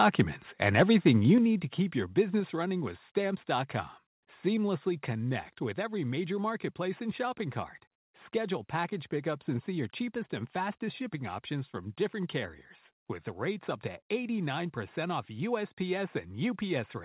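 Microphone overload at 0.01 to 0.22 s and again at 0.62 to 1.11 s, just before "you need to keep": peaks land about 2 dB and then about 5 dB over the limit, their tops sheared off with harsh crackle. The likely cause is input gain set too high.

Microphone volume stepped down at 1.38 s, just before "need to keep your", by about 6 dB; at 2.40 s, between "need to keep your" and "running with", by about 3 dB; and at 4.89 s by about 2 dB. Each is a sudden level drop, likely the call software cutting input gain after the overloads. Through all of this, nothing is heard above 4 kHz, which fits a narrowband G.711 call path at 64 kbps.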